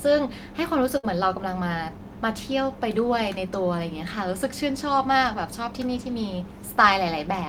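Speech clip with one burst of packet loss from 0.97 to 1.05 s. For about 58 ms the receiver stretches the last received sound and fades it down, then playback resumes with roughly 60 ms of speech skipped, leaving an audible jump.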